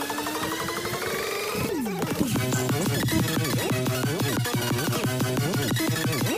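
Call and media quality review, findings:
Wrong sample rate, whole clip. Sound runs 2.76 times too fast, pitched up about 17.6 semitones. Speed and pitch shift together. Points to playback-rate mismatch, not a time-stretch. Ratio fits 16 kHz audio played at 44.1 kHz without resampling. Probable component: output path or device clock configuration. Check the rate declared at the sink.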